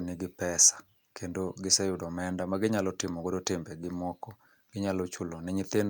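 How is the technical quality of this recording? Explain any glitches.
No glitches turn up here; the speech just runs along as recorded without anything jumping out as a technical problem.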